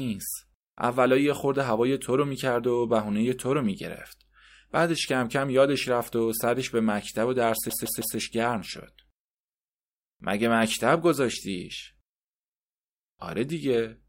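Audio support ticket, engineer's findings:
CD stuck on one turn, 7.70 to 8.17 s. Speech stutters as the same 0.16 s segment repeats three times, with a brief mute at each jump. Probable component: scratched disc throwing the laser back one track per rotation. Waveform and spectrogram show three identical blocks separated by thin silent gaps.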